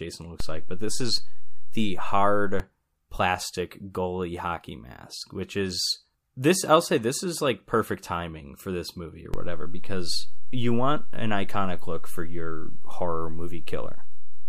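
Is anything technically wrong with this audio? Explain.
Yes. There are two DC steps. At 0.40 s the waveform's zero line jumps by about -18 dBFS and holds until 2.60 s, just before "plastic goalie hockey mask". At 9.34 s, after "for this movie or", it jumps by about -17 dBFS and stays there to the end. Each offset shift thumps while the speech carries on unchanged.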